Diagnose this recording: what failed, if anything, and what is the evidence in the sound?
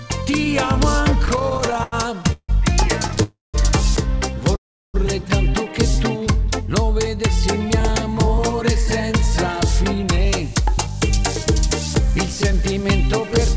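Repeated stalls (stutter) at the network and jitter-buffer stage, from 1.26 to 3.21 s. The audio catches 22 times. The receiver stretches the last sound to fill each wait, adding 451 ms in all, the longest hold 162 ms. Nothing is lost. The passage simply drags and stutters.

Two call audio freezes follow, at 3.23 to 3.56 s and 4.56 to 4.96 s. In each, the sound hangs as a fading buzz, then drops to silence, for 170 ms and 360 ms. It resumes where it stopped, adding about 310 ms and 380 ms. The likely cause is packets held up in transit, emptying the jitter buffer.

A jitter buffer speed-up runs from 7.81 to 13.46 s. The receiver trims short pitch-period slices to work off the delay it built up. Playback runs at 102% speed, the pitch unchanged, shedding roughly 150 ms. Through all of it, nothing above 8 kHz passes, consistent with a G.722 call codec.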